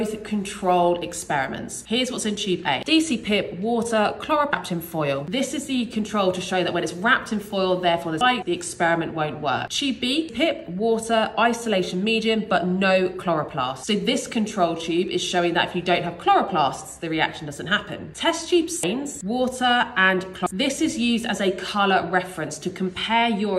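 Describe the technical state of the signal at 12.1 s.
At 12.1 s the signal is intact, with no dropout, clipping, distortion or other technical fault to be heard.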